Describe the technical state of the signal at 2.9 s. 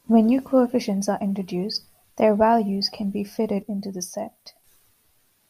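At 2.9 s the speech signal is intact, with no fault present at that moment.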